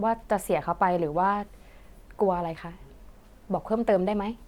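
Speech recording with no audible technical faults.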